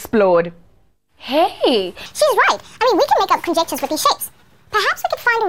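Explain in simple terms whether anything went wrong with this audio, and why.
Wrong sample rate, from 2.06 s to the end. From that point the audio plays back too fast, so everything runs 1.5 times quicker and jumps about 7 semitones higher in pitch. The samples are being read out faster than they were captured, with nothing adjusting for the difference. That ratio fits sound recorded at 32 kHz but played at 48 kHz. Because speed and pitch are tied together here, the sound comes out both rushed and squeaky.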